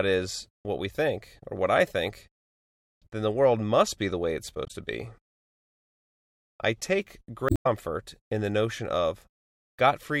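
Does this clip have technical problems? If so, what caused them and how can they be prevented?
Yes. Damaged data in the compressed stream at 4.65–4.71 s and 7.46–7.67 s: corrupted bytes make the decoder misread frames and lose sync, giving a brief glitch in the audio. Prevent it by checksumming files and transfers and keeping metadata out of the audio stream.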